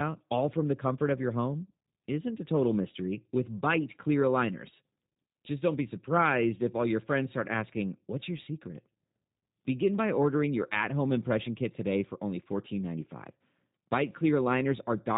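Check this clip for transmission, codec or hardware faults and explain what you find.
The clip has one codec fault, present throughout: G.729 coding, a low-rate speech codec whose sound fits about 8 kbit/s. It rebuilds speech from a vocal-tract filter, pitch predictor and sparse pulses, with nothing above 4 kHz, so speech sounds plainly band-limited, rough and synthetic.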